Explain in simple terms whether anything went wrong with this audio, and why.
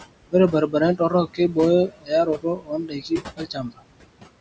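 Noise suppressor artifacts run through the whole speech clip. The call's noise suppressor strongly lowers the steady room noise between words, so the background sinks and returns under the speech.

Speech cut by the noise suppressor happens three times: 0.51 to 0.74 s, 0.96 to 1.57 s, and 1.87 to 3.89 s. The suppressor mistook quiet parts of the speech for noise and turned them down with the background. Soft sounds and word endings seem swallowed, briefly at first and then for well over a second in the last stretch.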